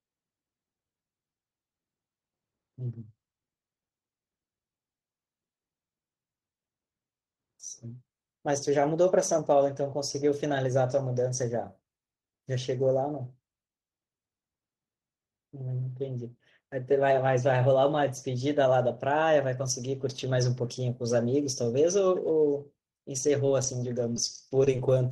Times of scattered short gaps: 23.27-24.89

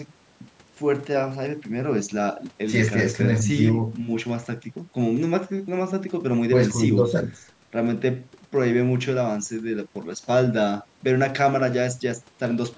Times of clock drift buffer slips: 1.01-10.75

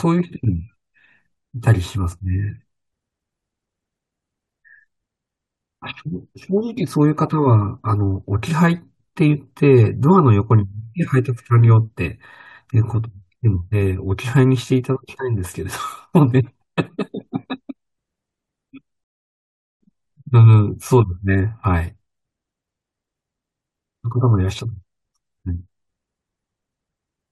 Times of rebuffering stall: 19.04-19.81

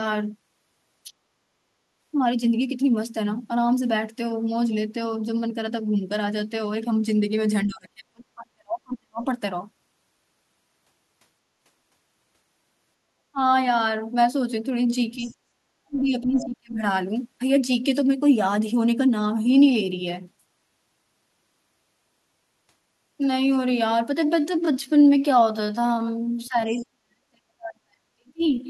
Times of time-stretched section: 24.14-28.70

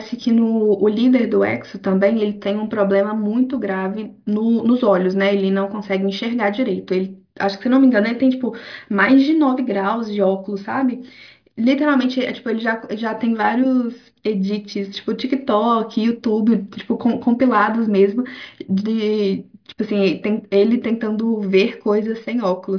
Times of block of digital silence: none

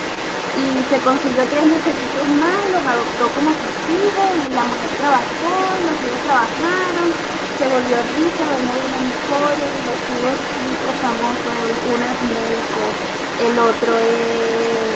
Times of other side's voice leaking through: 0.00-14.96

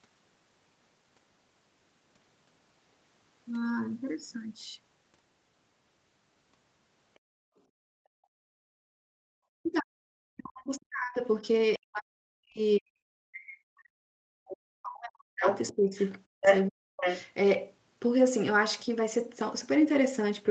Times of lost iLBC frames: none

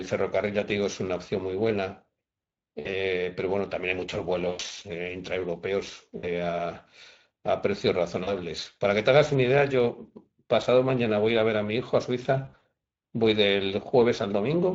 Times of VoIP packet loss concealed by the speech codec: 2.79-2.91, 4.49-4.61, 6.17-6.32, 8.23-8.33, 12.45-12.62

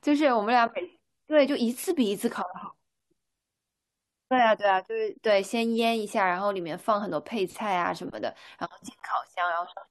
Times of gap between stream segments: 2.99, 9.00

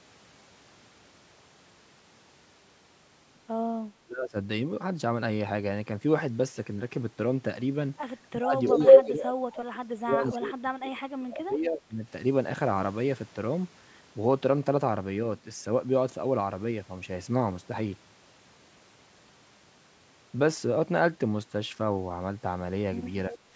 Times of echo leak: 8.66-9.04, 23.32-23.39

